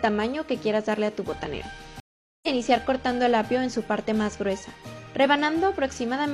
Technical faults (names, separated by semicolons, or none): stream reconnect